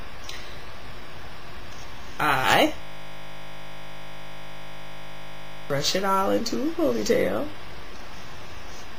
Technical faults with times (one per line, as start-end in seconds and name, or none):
2.82-5.70 system hang loop